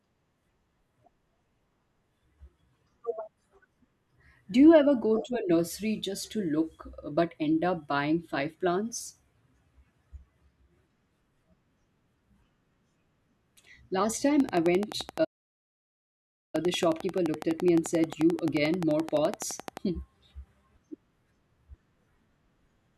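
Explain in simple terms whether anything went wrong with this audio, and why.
Two things go wrong, both in the back half of the speech.

The first is a train of clicks. From 14.40 s to 19.78 s there's a steady ticking laid over everything, about 11.5 clicks per second at an even pace, roughly 50 in all, and loud enough to stand out from the speech. They keep going through pauses too. An evenly spaced run like that likely comes from electrical interference from nearby gear or a faulty connection or power supply.

The second is a playback stall. At 15.24 s the speech simply cuts out and stays silent for about 1.3 seconds, picking up again at 16.55 s. That's what happens when the player runs dry of audio data or gets held up and has to wait before carrying on, which is the likely explanation here.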